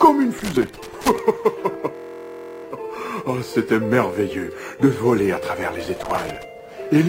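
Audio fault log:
0.39–1.19 s and 5.84–6.43 s, loose connector crackle: two irregular bursts of scratchy crackle. A worn or dirty contact is making and breaking as it shifts, chopping the signal on and off, with any DC on the line adding little pops at each break.
1.95–2.65 s, system hang loop: the driver stalled while the hardware kept replaying one 23 ms slice, which fits a 1024-sample buffer, about 30 times. At that length the repeats blur into a steady buzz near 43 Hz, and afterwards the sound resumes with essentially nothing skipped.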